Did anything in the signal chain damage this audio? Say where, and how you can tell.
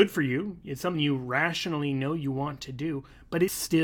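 Yes, the codec stage dropped audio twice: compressed frames skipped. At 0.94 s, between "for you it's" and "you rationally know you", the speech jumps ahead by roughly 70 ms, a few whole frames gone. At 3.47 s there's another jump of around a tenth of a second. You can tell it's frame loss because at each join the speech jumps ahead by the length of the missing frames.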